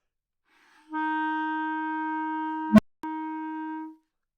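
At 2.70 s an unstable filter takes over the audio. A low tone of around 200 Hz swells from nothing to clipping in about 85 ms. The recursive filter's coefficients put it past the point of stability, so each pass feeds back more energy than the last until the values overflow. The tone then stops dead, leaving about 250 ms of silence that ends at 3.03 s when the filter resets. Acoustic feedback howl would build more gradually and keep ringing rather than cutting out abruptly.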